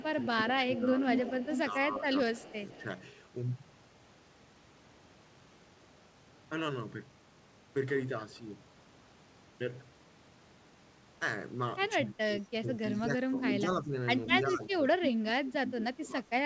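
From 0.0 to 2.83 s an echo leak is heard: a copy of the speech about 163 ms late and roughly as loud as the original, likely from a loudspeaker echo the canceller failed to remove. Over 0.14 to 2.88 s the speech is suppressed in double talk, dipping by up to roughly 10 dB for about a second and a half in total. The likely cause is the canceller ducking the talker along with the echo. From 11.96 s to the end the suppression returns more deeply, with drops of around 20 dB. Echo leaks recur at 13.42 to 14.37 s at about speech level and at 15.68 to 15.97 s about 10 dB quieter, both with the same 163 ms delay, through a G.722 call path that carries nothing above 8 kHz.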